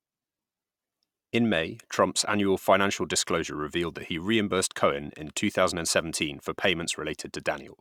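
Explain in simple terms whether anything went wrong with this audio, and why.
Nothing went wrong here: the speech comes through steadily all the way, with no dropouts, glitches or distortion to be heard.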